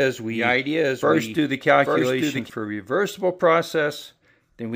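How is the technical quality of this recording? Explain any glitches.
The recording has one clear problem: a doubled audio track that's already going when the clip starts and stops abruptly at 2.5 s. For that stretch, a second full-band copy of the sound trails about a second behind, a few dB quieter than the original. The copy is dry, with no decay or room colour, so the overlap sounds like a flat stutter rather than reverb. The likely cause is the same signal arriving again over a slower capture path, or an edit leaving two copies out of sync.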